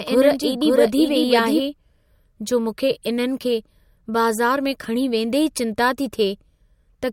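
From the very start until about 1.6 s there's a doubled audio track: a second full-band copy trails roughly half a second behind, a few dB quieter, with no room tail. It then cuts off abruptly, likely from a slower parallel capture path.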